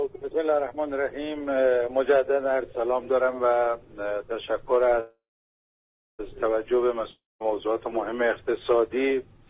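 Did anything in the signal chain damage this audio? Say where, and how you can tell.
Yes. Call audio freeze, 5.00 to 6.21 s, at the network and buffer stage. The last sound is carried on as a fading buzz, then about a second of silence, and the audio resumes exactly where it stopped, with nothing skipped. Everything after it now runs about 1.19 s late. That pattern of a gap inserted with no content lost points to packets that were likely held up in transit, leaving the jitter buffer empty until they arrived.

Long network dropout, 7.11 to 7.44 s, also at the network stage. Again the last sound is stretched into a decaying buzz that gives way to about 0.2 s of silence, but this time the audio returns further along. Roughly 0.3 s of material is simply gone. That is the signature of a stretch of packets that likely never arrived, so the receiver concealed the hole and moved on. Behind both faults sits a band-limited call path with nothing above 4 kHz, which fits G.711 mu-law.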